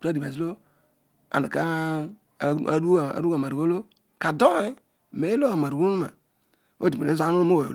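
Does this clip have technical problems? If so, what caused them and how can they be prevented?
No, nothing in this speech recording points to a technical fault, so no corrective action is needed.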